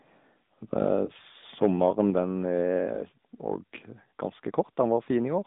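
AMR narrowband mobile codec, throughout: the speech has passed through the 2G/3G AMR-NB codec, which samples at 8 kHz and rebuilds the voice from a vocal tract model excited by a handful of pulses. The band runs from 150 Hz to 3.7 kHz, so nothing above that survives. The codec damage is plainly audible as a buzzy, synthetic edge, which fits the 10.2 kbps mode.

Lost AMR speech frames, 1.06 to 1.11 s: a radio error made a speech frame fail its check, so the decoder filled the gap by repeating the last good pitch and vocal tract settings at reduced gain. The result is a brief dip or warble in the speech before normal decoding resumes, consistent with a single lost 20 ms frame. The speech returns weak or rough for a moment afterwards.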